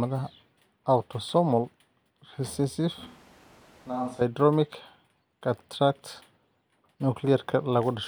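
The close microphone's feed likely drops out in this speech recording from 3.07 to 4.21 s, causing a switch to a distant microphone. The sound turns suddenly roomy and hollow, with thinner bass, a level about 10 dB lower, and background noise rising to around 20 dB below the speech.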